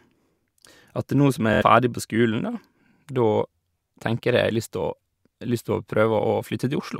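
A brief buzzing stutter runs from 1.53 to 1.63 s, just before "ferdig på", as one short slice repeats in a rapid machine-gun pattern. This is Bluetooth stutter: about 70 ms of data went missing, which fits three lost packets, and the receiver replayed its last buffer until fresh data arrived.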